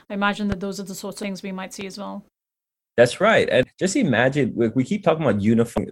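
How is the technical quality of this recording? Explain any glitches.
The recording has two kinds of fault: two loud pops and three short glitches from damaged data in a compressed stream.

Loud pops sit at 0.52 to 0.55 s, between "I imagine" and "those are the sorts", and at 1.81 to 1.84 s, between "we might" and "as well". Each is a single sharp thump, roughly 10 dB and 5 dB above the speech respectively, with the speech continuing underneath. The likely cause is a sudden voltage step from a plug, switch, static discharge or driver glitch, shaped by the circuitry that follows.

The damaged data in the compressed stream shows up as brief chirps or blips at 1.23 s, between "those are the sorts" and "we might", and at 3.63 s and 5.78 s. At each point, corrupted bytes threw the decoder out of sync, so it skipped ahead to the next valid frame.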